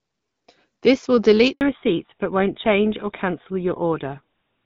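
At 1.53 s there's a handover gap: the call hops networks, no speech frames get through, and everything goes silent for 80 ms. From 1.61 s on, the call falls back to narrowband. Nothing above 4 kHz survives, so the speech goes duller and rougher, pointing to an older GSM codec.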